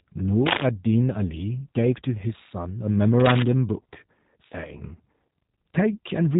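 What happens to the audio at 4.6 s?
At 4.6 s you're hearing the same G.729 codec damage that runs through the whole clip, not a one-off event. The speech is rebuilt from a vocal tract filter, a pitch predictor and a handful of pulses per frame rather than the real waveform, which fits an 8 kbit/s coder. So it comes across plainly rough and a bit synthetic, and there's nothing above about 3.8 kHz, leaving it dull and band-limited.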